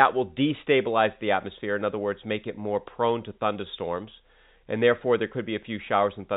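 Speech over G.711 telephone coding, with no technical faults.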